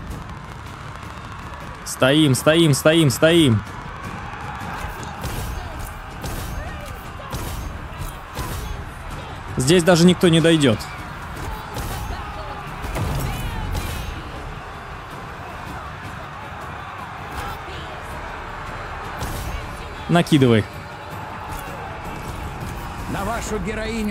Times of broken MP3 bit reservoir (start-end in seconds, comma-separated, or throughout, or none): none